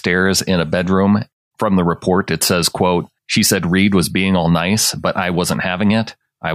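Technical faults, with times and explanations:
No technical faults can be heard in this recording.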